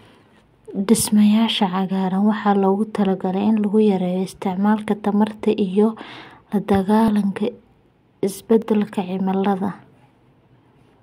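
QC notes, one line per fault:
7.08 s: dropped buffer (overrun). The speech jumps ahead, with about 30 ms missing. Likely the input buffer was overwritten before being read.
8.62 s: dropped buffer (overrun). A skip in the speech, losing about 10 ms. Likely samples went unread before the hardware replaced them.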